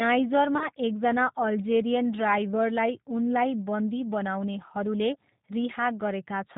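It's a speech clip, and the whole thing carries the sound of the G.729 codec: everything above 4 kHz is gone, and the voice comes out rough and a bit synthetic, rebuilt from a vocal tract filter and a handful of pulses per frame. The damage is plainly audible, which fits an 8 kbit/s G.729A link. Around 0.58 to 0.68 s there's VoIP packet loss concealed by the speech codec. A gap that fits a single lost 20 ms packet gets smeared into a fading stretch as the decoder extrapolates, and the voice stays weak for a moment afterwards.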